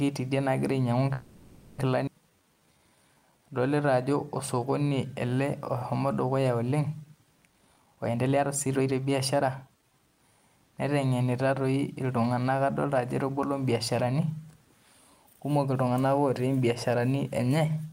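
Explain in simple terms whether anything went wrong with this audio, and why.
Several things went wrong, all tied to audio packets arriving unevenly over the call.

Call audio freeze: packets were likely held up in transit, leaving the receiver's reserve empty. From 1.13 to 1.79 s the last sound is stretched into a fading buzz for about 650 ms. When the packets arrive, the speech picks up exactly where it stopped, so nothing is lost, just delayed.

Skip ahead: at 2.06 to 2.08 s a chunk of speech was thrown away while later audio was already waiting. Playback jumps forward almost seamlessly, but about 0.4 s of speech is simply gone, its two sides joined directly.

Jitter buffer slow-down: with its reserve running low, the receiver repeated tiny slices of the sound over and over to rebuild it. From 2.30 to 5.26 s the speech plays at 87% speed, at the same pitch, adding 392 ms and sounding drawn out.

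Jitter buffer speed-up: later the receiver held more audio than it wanted, so it cut out tiny slices repeatedly. From 7.46 to 10.40 s the speech runs at 122% speed, at the same pitch, losing about 0.7 s and sounding hurried.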